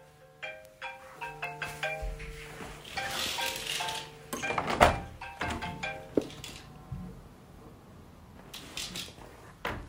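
The clip is a recording of sounds marked by two bit error spikes, single isolated ticks at 0.65 s and 1.44 s. Each is one sample where a flipped bit jumps the value by a power of two, peaking at about -24 dBFS, then returns at once. Unlike a dropout click or buffer glitch, nothing is missing or repeated around it, and the broadband tick has no relation to the surrounding sound.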